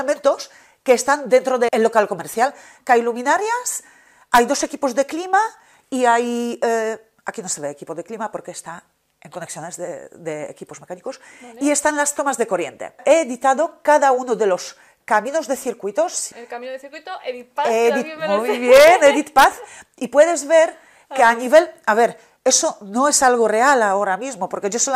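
No faults detected anywhere in the clip; nothing to flag.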